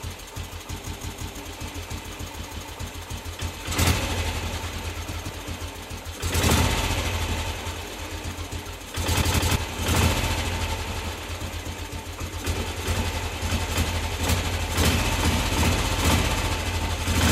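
An everyday-sound recording stutters five times, as one short piece of about 171 ms replays with hard joins at 0.85–1.37 s (three times), 2.39–2.73 s, 5.12–5.29 s, 9.22–9.56 s and 10.92–11.09 s. This repeated buffer fault, fitting an 8192-sample buffer, arises when fresh audio arrives late and the last block plays again, dropping a fraction of a second each time.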